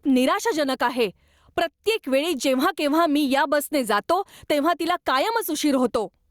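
Gain pumping throughout: the gain swings about 10 dB, squashing loud and soft parts closer in level, likely excessive input gain driving a fast limiter.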